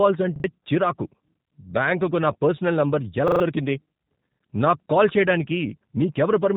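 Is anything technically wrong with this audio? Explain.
Yes. There are two problems.

The whole clip is coded with G.729 at 8 kbit/s. This codec rebuilds speech from a filter model, pitch prediction and a few pulses per frame. Nothing above about 3.8 kHz survives. The speech sounds rough, thin and slightly synthetic.

There is a repeated buffer at 0.36 to 0.44 s. There is another at 3.28 to 3.4 s, just after "బ్యాంకుకు నా పర్సనల్ నంబర్". Audio arrived late, so the last short piece played again, which fits a 40 ms buffer. The first stutters twice and the second three times. Each has hard joins, and a little real audio is lost.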